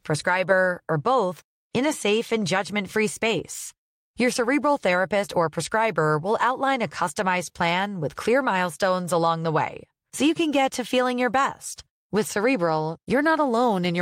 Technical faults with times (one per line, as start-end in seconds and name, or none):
none